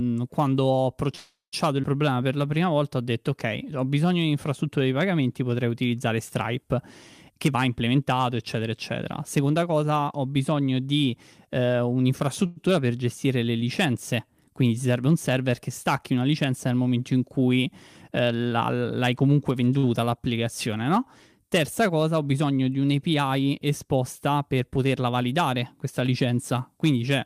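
Right at the start, from 1.15 to 1.54 s, there's a call audio freeze. The speech stops moving and the last sound gets stretched into a buzzy tail that fades out, with about 160 ms of it going fully silent. After 370 ms of fill it picks up exactly where it left off, so nothing's lost, it's just been pushed later. That's most likely packets held up in transit and the jitter buffer running dry.

Almost straight after, at 1.82 to 1.85 s, there's a skip ahead. Around 70 ms of speech is simply gone and the two sides are butted together with only a sliver of fill. A stretch of audio was dropped while later audio was already waiting.

Then from 2.06 to 2.55 s the jitter buffer slow-down kicks in. The receiver repeats pitch periods to rebuild a reserve, adding 72 ms, so the speech plays at about 87% speed. The pitch holds, but sounds get drawn out.

From 7.30 to 9.84 s, ending just before "ho bisogno di eh", there's a jitter buffer speed-up. 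The buffer had too much queued, so it trimmed out short pitch-period chunks, roughly 0.4 s in total. The speech runs at about 114% speed and sounds noticeably hurried, though the pitch stays put.

At 12.46 to 12.58 s, right before "per gestire le licenze", there's a second, shorter call audio freeze. The last sound is held for 104 ms as a brief buzzy smear with no drop to silence, then the speech carries on without anything missing. Again, the likely culprit is delayed packets emptying the buffer.

Just after "licenza nel momento in", from 17.64 to 19.23 s, comes a milder jitter buffer speed-up. It runs at about 106%, shaving out roughly 100 ms. It's subtler than the first one, but the speech still sounds hurried.

Finally, at 19.78 to 19.85 s, there's a short stall from a late packet. One packet missed its slot, so the receiver stretched the current sound for 51 ms until it showed up, then continued from the same spot. 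You hear a sound held a touch too long with a slight buzz or dip, but nothing is actually missing.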